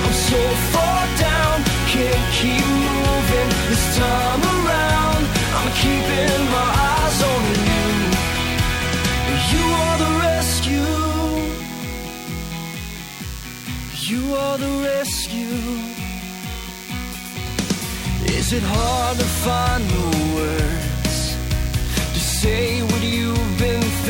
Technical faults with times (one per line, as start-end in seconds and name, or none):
0.00-24.10 DECT cordless phone buzz